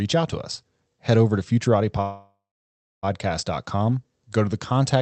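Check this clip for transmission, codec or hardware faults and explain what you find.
One transmission fault: a call audio freeze from 2.01 s to 3.05 s, likely a packet delay that emptied the jitter buffer. The speech continues as a fading buzz, then about 640 ms of silence, and resumes where it stopped with nothing lost, adding roughly a one-second gap. The rest passes through an Opus-coded call path with high frequencies cut off at 8 kHz.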